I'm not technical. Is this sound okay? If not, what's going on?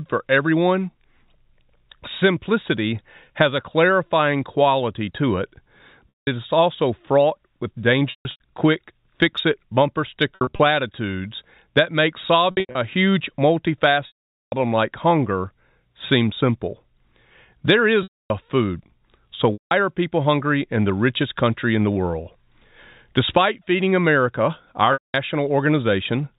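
No. There is packet loss with pitch repetition at 6.10, 8.1, 10.35, 12.51, 14.07, 18.03, 19.53 and 24.93 seconds. Bits of the transmission went missing, and the receiver filled each gap by repeating the last sliver of sound. Unlike a plain dropout, you hear a brief held buzz before the sound fades away. The longest gap, at 14.07 s, fades out before the sound returns.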